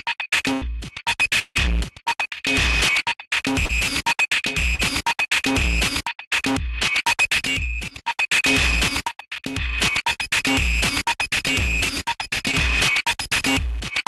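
From 0.53 to 0.63 s there is a burst of packet loss. About 80 ms of audio never arrived in time. The receiver stretched the last sound to cover the hole and turned it down as it went. The audio then picks up further on, with that stretch missing.

From 1.39 to 1.57 s the sound is carried on by the receiver for about 160 ms and fades. Then about 30 ms of silence follows. This is likely a long network dropout, with about 160 ms of audio lost. The sound returns past the lost part.

Short concealed packet loss occurs three times: 3.65 to 3.71 s, 4.75 to 4.81 s, and 10.13 to 10.17 s. Each time, 20 to 40 ms failed to reach the decoder. The receiver extended the preceding sound and blended back in. This is heard as a brief smear or wobble. The call path's coding, with a top end near 12 kHz that fits Opus at about 40 kbps, stays present throughout.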